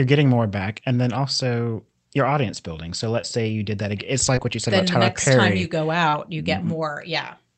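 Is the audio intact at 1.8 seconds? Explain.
Yes, the audio is intact at 1.8 seconds, with no dropout, glitch or other fault at that moment.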